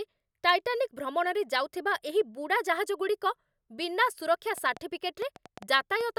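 Interference from nearby equipment or a faulty connection or power supply is the likely source of a train of clicks from 4.58 s to 6.02 s, in which near-identical pulses land on the speech at about 4.9 per second, unevenly spaced, about seven in all. They peak a few decibels above the speech itself, so they come through as distinct ticks and pops over the talking and in the gaps between phrases.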